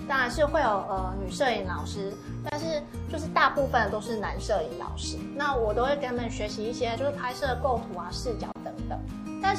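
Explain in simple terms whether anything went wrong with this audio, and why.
Two things went wrong. The whole clip has a watery, swirly quality, with the treble sounding cut off and sharp sounds like hisses turning metallic and smeared. This is MP3 compression damage, and it is plainly audible here. The likely cause is an encoder short of data: it throws away high frequencies above a fixed point and drops quieter details that flicker on and off. That flicker is what sets it apart from a simple dull or muffled recording.

There are also two brief holes of silence, at 2.50 to 2.52 s and at 8.52 to 8.56 s, roughly 27 and 34 milliseconds long, six seconds apart. This is a gap at a join of encoded pieces. The audio was encoded in separate chunks and stuck together without trimming the silent padding each encoder run adds at its start and end. Unlike a random dropout, nothing is lost. The sound picks up exactly where it stopped, and the gaps fall at a regular spacing.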